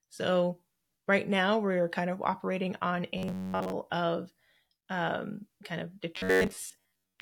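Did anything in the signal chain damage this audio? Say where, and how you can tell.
Yes. The damage sits at the driver or buffer stage. Robotic sound from repeated short buffers appears from 3.18 to 3.72 s, between "kind of operating on" and "of um kind of". It returns from 6.16 to 7.21 s, after "of um kind of". Both spans carry a rigid metallic buzz at 93.8 Hz. That fits a block of about 10.7 ms replayed over and over. Late-arriving audio is the likely cause, with most of the real sound skipped.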